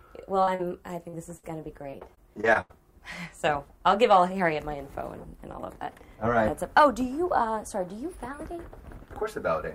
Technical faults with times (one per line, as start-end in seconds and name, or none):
0.43-0.61 short concealed packet loss
1.09-1.15 short concealed packet loss
1.37-1.45 burst of packet loss
1.91-2.71 repeated packet loss (robotic sound)